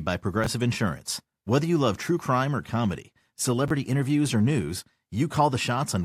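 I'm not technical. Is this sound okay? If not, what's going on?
No. Twice there's a quick jumbled moment where the speech seems to stumble: at about 0.44 to 0.46 s, and at about 3.68 to 3.70 s, between "true crime or comedy" and "interviews or news". This is called chunks out of order. The audio travels in tiny pieces of about 12 ms each, and here one piece arrived late and played after the next one, so the sound briefly runs in the wrong order with sharp joins.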